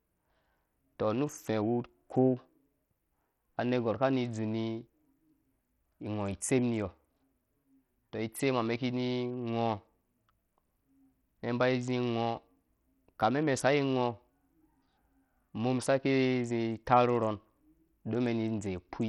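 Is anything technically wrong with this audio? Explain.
Yes. Across the whole speech clip there is heavy codec damage, likely from Bluetooth SBC compression at a rate that sounds close to 64 kbps. SBC splits the signal into a few wide sub-bands and hands out bits without a hearing model. Starved upper bands get little or nothing, so the treble flickers in and out while gritty quantisation noise and aliasing sit on the sound. Unlike a plain low-pass, content still reaches 21 kHz, only it comes and goes.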